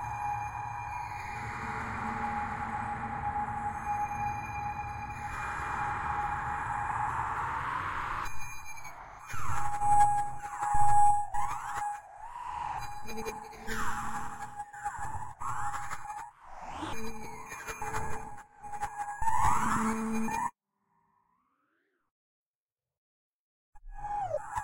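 No technical faults can be heard anywhere in this recording of sounds. Nothing in it breaks, drops out or shifts in a way that points to a problem in the signal path.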